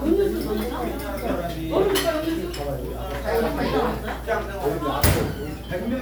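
Nothing faulty is audible in this recording of everyday sounds at any point.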